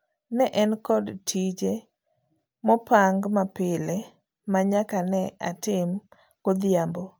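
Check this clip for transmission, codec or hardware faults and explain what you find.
Nothing in this speech recording points to a fault in how it was captured, encoded or carried. There is nothing to report at any point in it.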